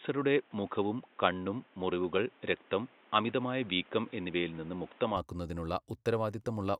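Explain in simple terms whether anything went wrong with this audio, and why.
From the start until about 5.17 s the speech sounds dull and muffled, with nothing above about 3.8 kHz and a faint new background noise underneath. Then it clears, with no gap and no change in loudness. The likely cause is the input switched to a poorer device.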